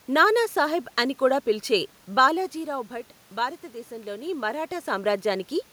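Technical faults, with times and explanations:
No technical faults turn up here; the room background and the level changes around 2 s and again near 4 s are just the room itself and the talker shifting position relative to the microphone.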